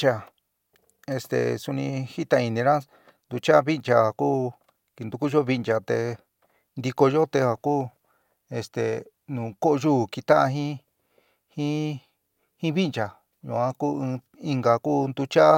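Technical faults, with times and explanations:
No technical faults are present.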